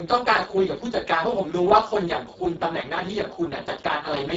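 From start to end the speech carries Speex codec damage: hoarse, buzzy and close to robotic, which fits a bitrate near 6 kbps. A spectrogram shows smeared harmonics, a shaped, noise-like fill above 4 kHz, and nothing above 7.7 kHz.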